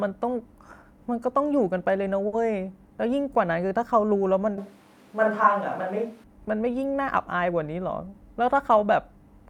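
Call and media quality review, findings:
Short stall from a late packet, 2.27–2.34 s: jitter buffer ran dry, receiver held last sound about 50 ms until arrival; nothing lost, stretched syllable, latency up 50 ms.

Switch to a distant microphone, 4.58–6.24 s: close mic likely dropped out, far mic took over; abrupt hollow, roomy, thinner sound, level about unchanged, room noise roughly 30 dB below speech.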